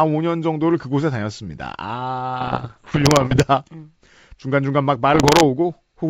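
Bit errors on the ADPCM link derail the decoder's step size and predictor, causing pops and rough bursts with brief level jumps from 2.41 to 3.40 s and 5.14 to 5.45 s.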